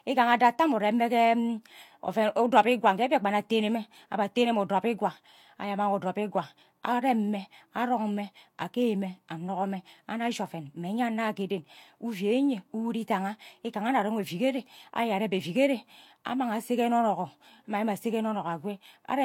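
Speech throughout carries two layers of coding artefacts heard together, with nothing above about 20.3 kHz, likely from transcoding between lossy codecs: a Vorbis stage, then HE-AAC at rates suggesting roughly 65 and 48 kbit/s.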